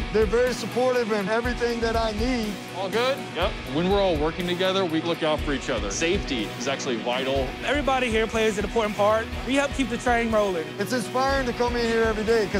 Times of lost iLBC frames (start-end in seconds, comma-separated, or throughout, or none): none